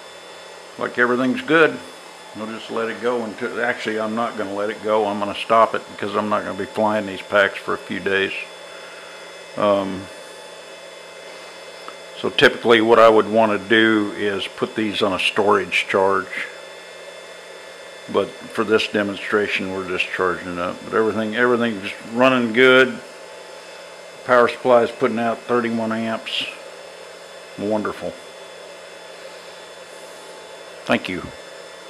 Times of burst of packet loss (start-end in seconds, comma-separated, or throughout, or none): none